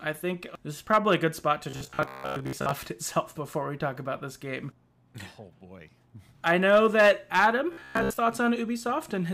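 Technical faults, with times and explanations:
1.70–2.71 s (just after "a good spot to") and 7.73–8.18 s, robotic sound from repeated short buffers: audio likely arrived too slowly, so about 15 ms chunks were replayed in place of most of the missing sound, imposing a rigid 66.7 Hz metallic buzz that only loosely tracks the speech.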